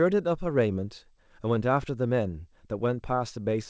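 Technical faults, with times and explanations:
Throughout: clock drift between sender and receiver. The sending side's clock runs slow, by roughly one and a half percent. Samples arrive a little late, so the receiver's jitter buffer keeps draining toward empty. To avoid gaps, the receiver has to pad the stream. The result is a faint, uneven unsteadiness in pace rather than a clear glitch. The drift rides on a call path with no content above 8 kHz, which fits a G.722 link.
0.28 to 3.51 s: repeated timing corrections. Across this stretch the receiver repeatedly repeats short slices of audio, so the sound plays at about 98 percent speed. In total the corrections add roughly 70 ms. Every edit goes the same way, lengthening rather than cutting. They are unevenly spaced and each one is small. If heard at all, they come across as tiny hiccups and a slightly dragging, irregular tempo, not as distinct dropouts.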